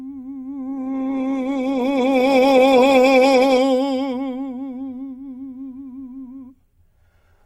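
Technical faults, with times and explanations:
0.70–3.67 s, call bitrate drop: the music turns rough and watery, with the top end dulled, for about 2.9 s before clarity returns. The encoder was starved of bits, coding coarsely and trimming high frequencies, which fits a fall from about 64 kbps to roughly 13 kbps.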